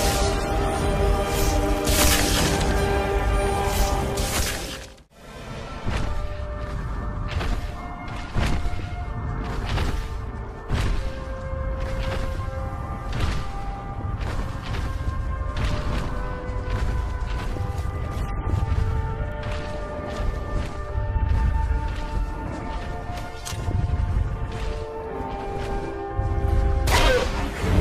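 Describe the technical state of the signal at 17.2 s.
At 17.2 s the signal is intact, with no audible dropout, distortion, glitch or other technical fault.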